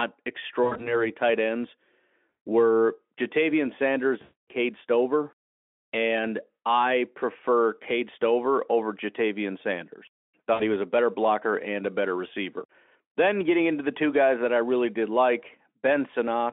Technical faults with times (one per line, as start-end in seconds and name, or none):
0.63-0.95 VoIP packet loss concealed by the speech codec
2.47 VoIP packet loss concealed by the speech codec
4.21-4.49 VoIP packet loss concealed by the speech codec
10.53-10.63 VoIP packet loss concealed by the speech codec